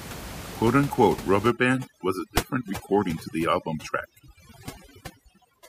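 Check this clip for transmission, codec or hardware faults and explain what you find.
One fault is present: overdone noise removal, running from 1.51 s to the end at 5.68 s. Before that point the room noise sits about 13 dB below the speech. From 1.51 s a noise reducer set far too aggressively cuts every frequency band that drifts near its noise estimate. Quiet speech detail goes with the noise, and the pauses drop to near silence with twinkling specks. The gaps collapsing to near silence set it apart from low-bitrate codec warble, which smears the speech but leaves the background noise in place.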